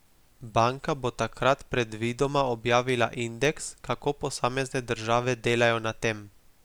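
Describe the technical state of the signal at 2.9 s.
At 2.9 s the speech signal is intact, with no dropout, distortion, clipping or other fault audible at that moment.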